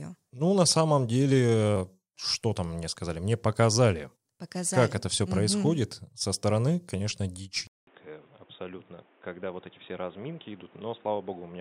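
At 7.67 s the speech cuts out for 200 ms, then returns duller and slightly quieter, likely an input switched to a poorer device. On a spectrogram there is a gap, then a hard ceiling at 3.8 kHz over a faint new noise haze, and the waveform shrinks a little.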